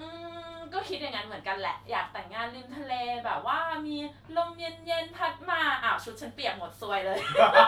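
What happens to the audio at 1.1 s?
Nothing goes wrong at 1.1 s; the speech there plays through intact, with no dropout, click, distortion or other fault at that moment.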